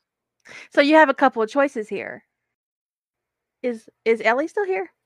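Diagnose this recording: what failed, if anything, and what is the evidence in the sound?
Nothing stood out on listening to this speech recording that would point to a failure at any stage of the chain.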